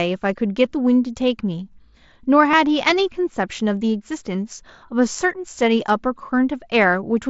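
At 2.52 s, concealed Bluetooth headset packet loss fills a 15 ms gap, likely a couple of lost packets, with repeated waveform, showing as a short copied stretch on the spectrogram.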